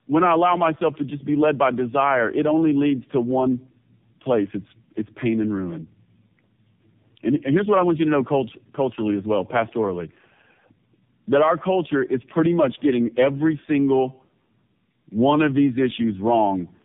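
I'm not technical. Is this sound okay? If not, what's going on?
No. The speech went through tandem speech coding for the whole clip. It was squeezed by one phone system's speech coder, unpacked, then squeezed again by another. Each pass roughens it further. It sounds muffled, with nothing above about 3.7 kHz, and warbly.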